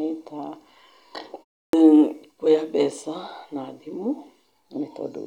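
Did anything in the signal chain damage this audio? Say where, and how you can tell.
Yes. A clipped start after a pause at playback: after a 0.32 s gap, the output device wakes late and swallows 52 ms (1.68–1.73 s), unlike muted pauses, where no sound is lost.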